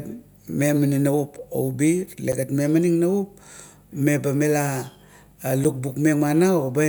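At 1.38 s, 2.32 s and 5.64 s, the speech drops to a block of digital silence lasting about 3 ms, 8 ms and 7 ms. The output went to zero abruptly, so each is a sharp tick. The first fits a 128-sample buffer left unfilled.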